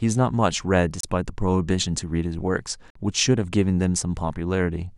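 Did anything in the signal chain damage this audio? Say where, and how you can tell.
Yes. The speech cuts to silence twice, at 1.01 s for 28 ms and at 2.90 s for 51 ms, then resumes. This is likely a Bluetooth stall in wireless playback. Delayed packets drained the headphones' buffer. Output paused until resent packets arrived.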